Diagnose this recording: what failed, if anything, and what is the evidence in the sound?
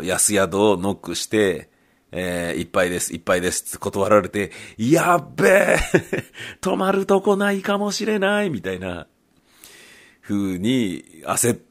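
Nothing failed; there is no evidence of a fault anywhere in the sound.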